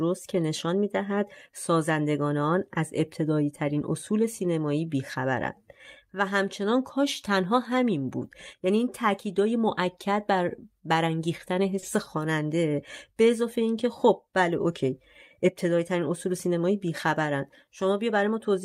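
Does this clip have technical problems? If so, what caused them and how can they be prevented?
Yes. At 11.79 to 11.84 s there is a short stall from a late packet: the jitter buffer ran dry, so about 30 ms of sound was held and stretched until the packet arrived. Nothing is skipped, which separates it from packet loss, though the timing slips by 30 ms. A slightly deeper or adaptive jitter buffer would prevent it.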